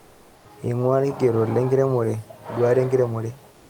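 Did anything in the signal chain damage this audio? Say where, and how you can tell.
Yes, at the codec stage: comfort noise in place of the background, most likely from Opus discontinuous transmission. With no speech detected, the sender stops transmitting and the receiver fills the gap with synthetic noise. It covers 0.00 to 0.45 s before the speech and 3.51 to 3.70 s after it. The room's textured background gives way to a smooth, featureless hiss, about 2 dB quieter, and the room's detail returns once speech starts.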